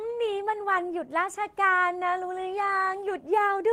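Nothing in the speech stood out as a technical fault on listening.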